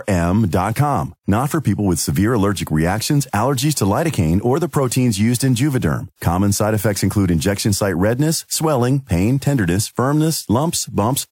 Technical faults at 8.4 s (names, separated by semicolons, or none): none